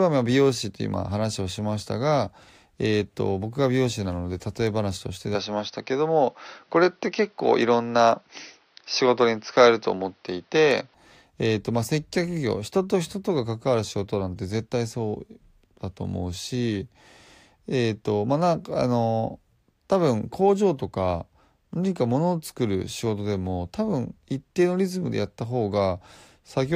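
Speech recording in which, from 5.35 s to 10.94 s, the sound turns duller, with nothing above 6.1 kHz, a level shift of about 5 dB and a faint new noise floor, with no gap at either change. The likely cause is an input switched to a poorer device.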